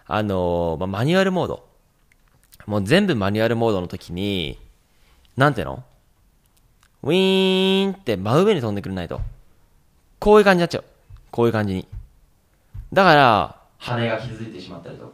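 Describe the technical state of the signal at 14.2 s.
At 14.2 s the signal is in a switch to a distant microphone, from 13.88 s to the end. The sound turns suddenly roomy and hollow, with thinner bass. Level drops about 5 dB. Background noise sits roughly 35 dB below the speech. The close microphone likely dropped out.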